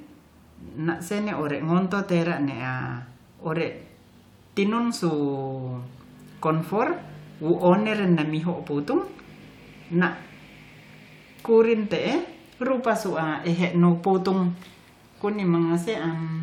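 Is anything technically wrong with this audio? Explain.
No, the speech recording shows no technical faults anywhere in its signal path.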